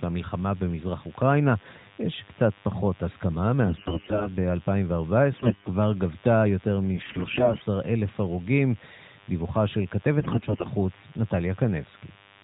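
A nearby DECT cordless phone or base station is pulsing radio bursts every 10 ms, and the audio circuit rectifies them, so a DECT cordless phone buzz runs through the whole clip: a thin, steady 100 Hz buzz rich in harmonics, sitting roughly 30 dB below the speech.

AMR bit errors then strike at 3.64–4.29 s, 5.32–5.70 s, 6.94–7.65 s and 10.20–10.70 s. Weakly protected bits in the codec frames arrive corrupted while the core checksum still passes, so excitation pulses and fine parameters decode wrongly. The speech keeps its rough pitch and level but turns hoarse, scratchy and gargly, worst in the third stretch. The underlying narrowband AMR coding, which fits the 12.2 kbps mode, adds only light band-limiting below 4 kHz.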